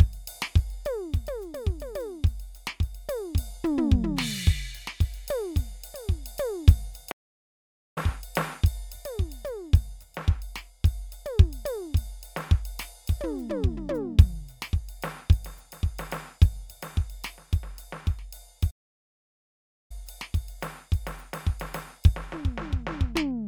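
At 7.11 s the music cuts out mid-flow and stays silent until 7.98 s, about 0.85 s; a second, longer gap runs from 18.70 s to 19.92 s, about 1.19 s. Both are playback stalls, likely the player starving for data or having its output thread blocked. On a waveform each shows as a flat line between abrupt edges, and a spectrogram shows a vertical empty band across all frequencies.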